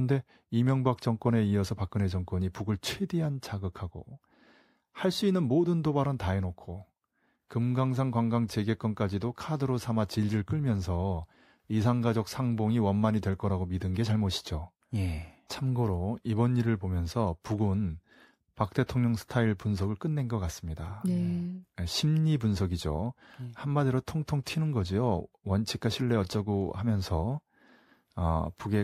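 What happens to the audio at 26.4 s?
Nothing goes wrong at 26.4 s: the audio runs on intact there, with no dropout, click, distortion or other fault.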